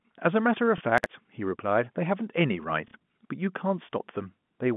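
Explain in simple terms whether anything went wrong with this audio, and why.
Packet loss with last packet repeated: twice, at 0.78 s for about 30 ms and at 2.88 s for about 60 ms, audio went missing and the last piece was replayed, giving a small blip the first time and a brief robotic stutter the second.

Chunks out of order: around 0.98 to 1.06 s, a 20 ms chunk arrived late and played three chunks after its proper place, so that moment sounds jumbled.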